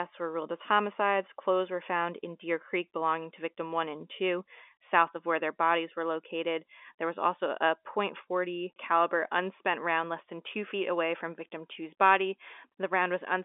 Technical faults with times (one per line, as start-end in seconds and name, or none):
none